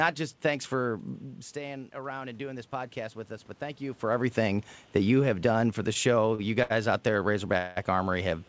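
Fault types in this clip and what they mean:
Clock slip clicks: Faint, regular ticks run through the speech from 0.25 s to the end, roughly every 0.3 s. Each tick is a single sample dropped or repeated. The likely cause is two devices running on separate clocks that disagree by around 70 parts per million. The small error adds up to a whole sample about three times a second. The ticks are clearest on loud, sustained sounds and vanish in pauses.
Automatic gain rising: Between 1.54 s and 3.01 s the whole sound slowly swells. The input had dropped by about 11 dB, so the automatic gain control judged it too quiet. It raised its gain by about 3 dB over roughly a second and a half. Voice and room noise grow louder together. The gain does not jump in a single step.
Short stall from a late packet: Two brief holds occur, at 6.35 s and 6.63 s. In each, a packet arrived late and the jitter buffer ran empty. 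The receiver stretched the last sound to fill the wait, 37 ms the first time and 73 ms the second. A sound is held slightly too long, with a slight buzz or dip. Then the speech resumes where it stopped. Nothing is lost.
Call audio freeze: From 7.57 s to 7.78 s the speech halts for 188 ms. The likely cause is packets held up in transit, leaving the jitter buffer empty. The receiver carries the last sound on as a fading buzz or hiss rather than going silent. When the packets arrive, the speech continues from the same point. A gap has been inserted, but nothing is missing.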